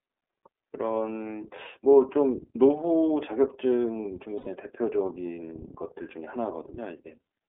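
Throughout, the speech carries iLBC codec damage: a narrowband line from 300 Hz to 3.5 kHz, with a plainly rough, slightly synthetic edge. On a spectrogram everything above 3.5 kHz is empty. The coarse texture fits the codec's 30 ms frame mode.

From 4.38 to 4.48 s, lost iLBC frames leave a gap of about 90 ms. The decoder filled it by repeating the last pitch cycle blended with noise, heard as a held, faintly buzzy vowel. A spectrogram shows frozen, smeared harmonics there, and the waveform shows a looping period before normal speech resumes almost immediately.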